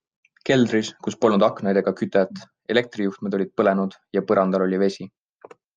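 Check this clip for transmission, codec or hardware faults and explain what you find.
No faults found in this speech recording; there is nothing audible to report.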